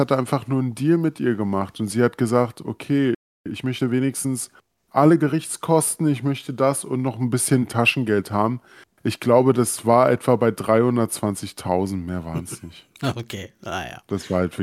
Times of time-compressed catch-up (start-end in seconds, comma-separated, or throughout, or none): 3.46-5.52